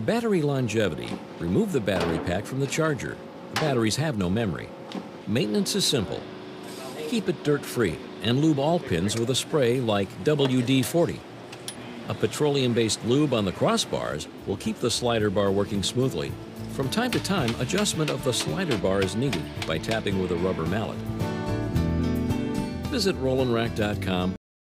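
A cut-off end arrives at 24.36 s: the sound stops mid-event and drops straight to digital silence for the final 0.42 s, with no decay or tail. The last stretch of buffers was never written out or played, so the audio simply ends there.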